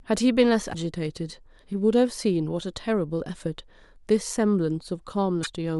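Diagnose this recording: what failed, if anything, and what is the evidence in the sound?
The failure is in the codec stage: damaged data in a compressed stream. The speech is interrupted twice by short glitches, from 0.69 to 0.75 s (about 54 ms) and from 5.40 to 5.47 s (about 72 ms). Each burst is the decoder hitting corrupted bytes in the encoded stream, misreading or discarding the affected frames, losing sync and searching for the next valid frame header before normal decoding resumes.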